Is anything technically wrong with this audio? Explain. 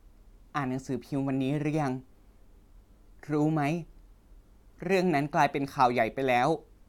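No, there are no faults.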